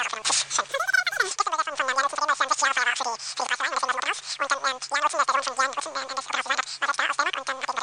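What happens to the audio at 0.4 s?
At 0.4 s the sound is racing and shrill, running about 2.76 times too fast and pitched up about 17.6 semitones, as it is throughout the clip. This is a wrong sample rate fault, which fits 16 kHz material played back at 44.1 kHz without conversion.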